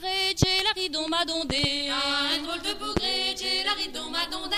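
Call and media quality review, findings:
Loud pop at 0.43–0.45 s, a double pop at 1.50–1.66 s, and another at 2.97–2.99 s. Peaks roughly 20 dB above the sound, the double a bit lower. Sound continues underneath. Likely a voltage spike from a switch, plug, static or driver glitch.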